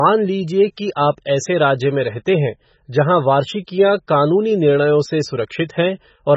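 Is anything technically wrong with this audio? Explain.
Yes. The speech is heavily damaged by MP3 compression for the whole clip. Nothing is heard above 7.9 kHz, so the top is dull and closed in. The texture is watery and swirly. The likely cause is an encoder short of bits, which fits a very low bitrate of around 16 kbps. It cuts the treble at a fixed point and drops weaker frequency detail. That detail flickers in and out between frames, and attacks sound smeared.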